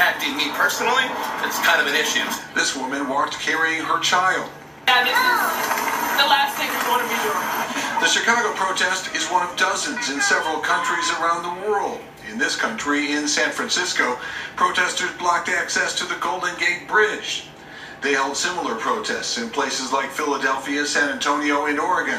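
Nothing stood out as a technical fault on listening.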